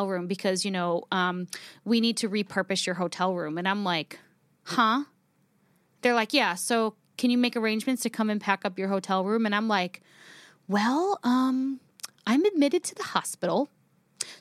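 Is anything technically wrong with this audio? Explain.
No, nothing technically wrong turns up anywhere in this speech recording.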